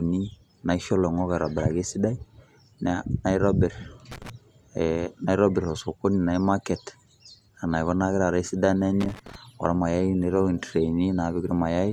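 Loose connector crackle at 4.12 to 4.30 s and again at 9.00 to 9.35 s, after "taata esidano": a worn contact making and breaking chops the speech into irregular scratchy bursts.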